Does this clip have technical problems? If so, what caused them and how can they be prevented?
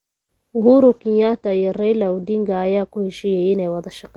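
Yes. From 0.62 s to 3.89 s the speech turns rough and muffled, which is a call bitrate drop. The call's bandwidth estimate fell, so the encoder was told to spend fewer bits. The sound points to a fall from roughly 32 kbps to 12 kbps, held at the lowest rate for about 1.57 s. The audio bandwidth narrows from 16 kHz to 8 kHz, and coarser coding adds the roughness. To prevent it, provide stable network capacity and set a higher minimum encoder bitrate.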